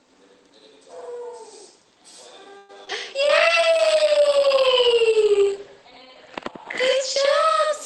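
All the way through, every sound is followed by a second copy at equal level about 85 ms later, a distinct slap that doubles the audio. This is channel delay (doubling): one channel arrived late, which fits a 4096-sample buffer at 48 kHz, and both channels were then summed to mono.

From 2.57 to 2.71 s the sound stalls into a fading buzz for about 115 ms, then resumes exactly where it stopped with nothing lost. This is a call audio freeze. Packets were likely held up in transit, emptying the jitter buffer, so the receiver stretched the last sound until data arrived.

Between 2.85 and 2.89 s there is a brief smear where about 20 ms of audio is gone. This is short concealed packet loss. That slice never reached the decoder in time, so the receiver extrapolated from the preceding sound and blended it back into the real signal.

Immediately after, from 2.89 to 2.91 s, the audio jumps forward, dropping about 70 ms with an almost seamless splice. 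This is a skip ahead. With later audio already queued, that stretch was dropped, recovering part of the delay the freeze had added.

From 3.23 s to the end the sound turns rough and muffled, losing its top end. This is a call bitrate drop. A falling bandwidth estimate pushed the encoder from 32 to 12 kbps, and the coded bandwidth shrank from 20 kHz to 8 kHz.

Overlapping this, from 3.25 to 4.42 s, the audio drags at about 93% speed with unchanged pitch, and sounds are drawn out. This is a jitter buffer slow-down. The receiver repeated short pitch periods to rebuild its reserve, adding 84 ms in total.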